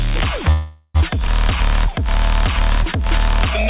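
At 0.52 s the sound hangs for about 0.45 s. The last bit is carried on as a fading buzz, with a short silence of about 30 ms, and then it picks up exactly where it left off. That's a call audio freeze, likely packets stalling until the jitter buffer ran dry.

Just after, around 1.27 to 1.30 s, there's a skip ahead. Roughly a tenth of a second of audio drops out, and the two sides are butted together with only a tiny 10 ms fill, so the sound lurches forward.

From 1.48 s to about 3.34 s the jitter buffer slow-down kicks in while the buffer rebuilds its reserve. The receiver repeats single pitch periods, stretching that stretch to about 97% speed, roughly 58 ms longer, with the pitch unchanged. Through all of this the narrowband call path shows, since nothing sits above 4 kHz, which fits G.711.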